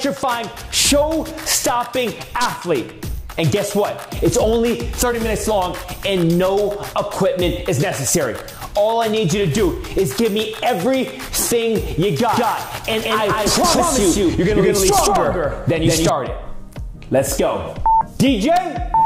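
From 12.33 s to 16.09 s, the audio is most likely being captured a second time through a slower path, so a doubled audio track is mixed in with the original. The second copy runs around 200 ms behind and sits at roughly the same level, full-band and dry, with no decay or room colour. Everything in that stretch is heard twice in quick succession, and the extra copy appears and vanishes abruptly at both ends.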